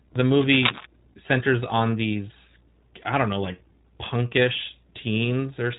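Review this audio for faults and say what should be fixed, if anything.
Throughout the speech, the iLBC codec cuts everything above about 3.8 kHz and leaves a plainly audible rough, synthetic edge. Each short block is coded on its own, which fits 20 ms frames at the 15.2 kbps mode. Unlike a simple low-pass filter, the roughness sits inside the remaining band, not just in the missing top. To prevent it, capture or carry the speech with a wideband codec instead of iLBC.

From 0.33 to 0.86 s, cable scratch noise covers the speech with dense, uneven rustling about as loud as the speech itself. It is most likely a worn cable or connector being moved, changing its contact resistance rapidly. Unlike clipping crackle, it does not follow the speech peaks. To prevent it, replace the worn cable or connector and secure it so it cannot shift during recording.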